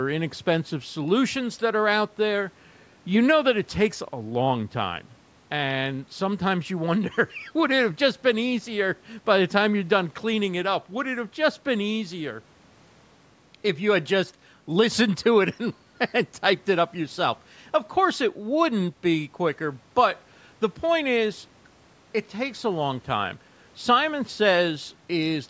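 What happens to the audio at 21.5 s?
Nothing goes wrong at 21.5 s: the speech carries on intact through that moment, with only the normal call microphone processing shaping its sound.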